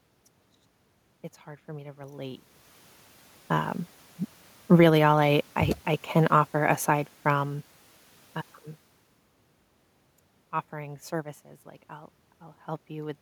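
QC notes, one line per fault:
4.91 to 5.45 s, automatic gain rising: the AGC decided things were too quiet and pushed up about 7 dB, so voice and room noise swell together before "I I can offer".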